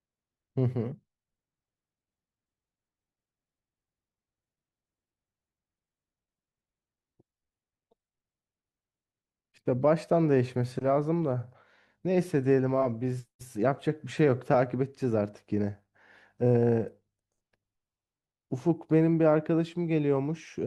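No technical faults can be heard anywhere in this speech.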